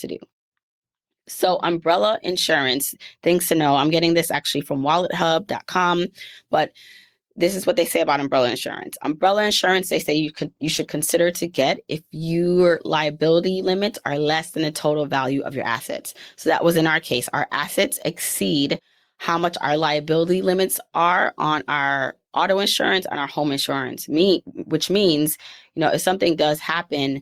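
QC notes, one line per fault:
9.36–11.89 s, call bitrate drop: after "say about umbrella insurance" the speech turns rough and muffled for about 1.5 s, fitting an encoder cut from 40 to 17 kbps, then clears by "if your liability limits". Unlike packet loss, there are no gaps or glitches, just steady coarseness.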